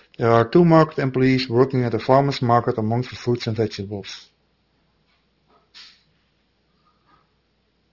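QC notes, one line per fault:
Throughout, aliasing: sibilants sound gritty and metallic, with harsh energy running right up to about 6 kHz. The speech was taken down to a 12 kHz rate without filtering first, so content above the 6 kHz fold point mirrors back as unrelated tones, roughly 20 dB below the speech.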